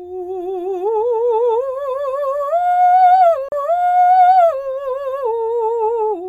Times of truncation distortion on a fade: none

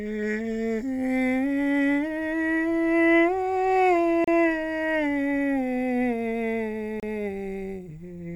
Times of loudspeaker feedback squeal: none

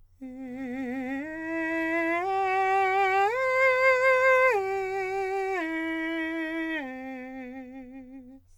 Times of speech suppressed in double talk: none

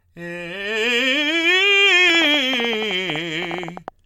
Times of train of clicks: 2.15-3.89

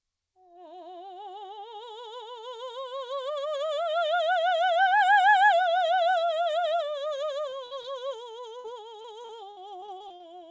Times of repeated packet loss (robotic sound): 9.02-10.24

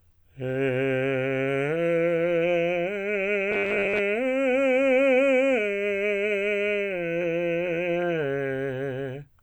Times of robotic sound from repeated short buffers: 3.51-4.00

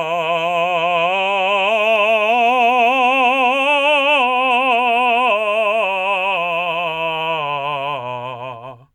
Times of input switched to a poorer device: none

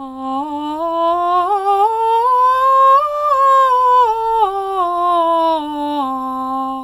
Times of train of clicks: none

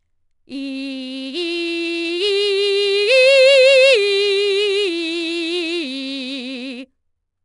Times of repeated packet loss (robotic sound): none

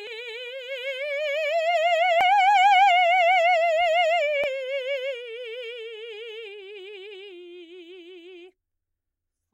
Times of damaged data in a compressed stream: 0.07, 2.21, 4.44

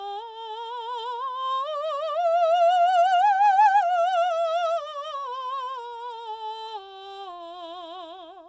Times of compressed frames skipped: none

